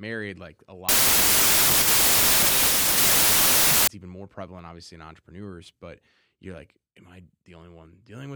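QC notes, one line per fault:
0.89–3.87 s, wrong sample width: the speech turns into a loud, harsh noise wash with the original only faintly audible inside it, running about 1.33 times too fast and raised in pitch. That ratio fits packed 24-bit samples read as 32-bit, so each value is assembled from misaligned bytes and only occasional ones keep the true top bits. An added noise burst would leave the speech at normal speed, and a plain speed fault would not bury it in noise.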